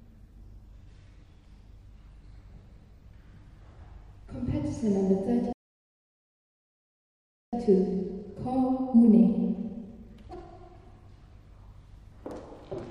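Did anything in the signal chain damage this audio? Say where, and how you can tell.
Yes. A playback stall damages it at the playback stage. The sound stops mid-flow at 5.53 s and stays silent until 7.53 s, a two-second gap. It then resumes. The player likely ran dry of buffered data, or its output thread was blocked.

Time-compressed catch-up follows, also at playback, from 7.53 s to 10.53 s. The audio runs about 1.1 times fast but keeps its pitch. The player trims its backlog by cutting small slices and cross-fading the joins.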